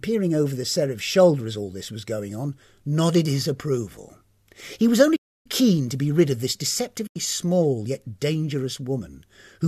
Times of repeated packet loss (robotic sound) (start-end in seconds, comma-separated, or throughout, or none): none